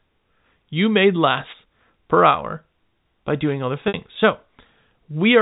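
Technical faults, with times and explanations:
1.45 to 1.55 s and 3.45 to 3.54 s, wireless microphone noise hit. Two short bursts of static break through, each about 0.1 s long. The first comes just before "per hour by". The second comes just after "per hour by". The radio link from the microphone dipped as reflected signals cancelled the direct one. With less signal reaching the receiver, its own hiss rose above the speech. That is why each hit sounds like a brief swish.
3.88 to 3.94 s, packet loss with pitch repetition. About 60 ms of audio is missing here, which fits three lost 20 ms packets. The receiver filled the gap by repeating the last pitch cycle it had received. The repeated cycle gives the voice a brief held, buzzy tone in place of the lost sound. Normal speech then resumes. The telephone-band G.711 coding around this gap keeps its usual narrow sound.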